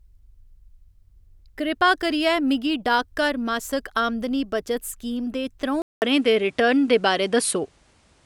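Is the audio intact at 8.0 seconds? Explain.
No, not at 8.0 seconds. From 5.82 s, right after "स्कीम दे", there's a short gap of about 200 ms, and then everything to the end sounds like an input switched to a poorer device, likely the system jumping to another mic or a headset's call profile. The band stops dead around 11.4 kHz, so it turns duller, the level shifts by a few dB, and a new, fairly faint noise floor sits underneath.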